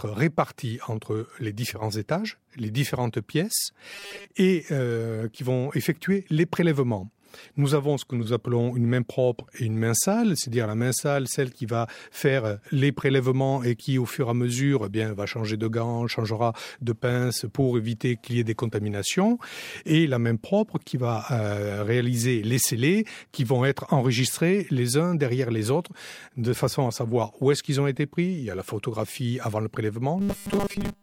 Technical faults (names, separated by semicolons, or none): robotic sound from repeated short buffers